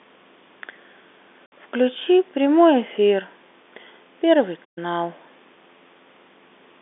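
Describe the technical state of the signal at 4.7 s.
At 4.7 s there is a playback stall from 4.64 to 4.78 s: output drops to silence mid-flow, likely because the player briefly ran out of data, then resumes.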